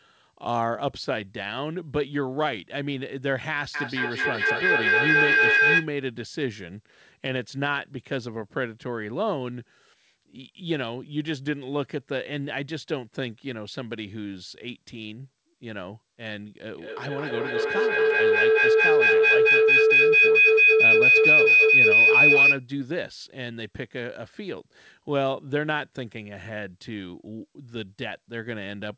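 From 3.74 to 5.93 s, and again from 16.69 to 22.66 s, a feedback howl rises over the speech. The sound from one loudspeaker is being picked up again by a microphone in the same room, and it returns louder each time. It narrows to a ringing tone near 1.5 kHz in the first episode and near 3 kHz in the second, peaking about 9 dB and then about 11 dB above the speech. Plain echo would fade with every repeat, and a test tone would hold steady. This howl grows louder, and one trip around the loop takes roughly a fifth of a second.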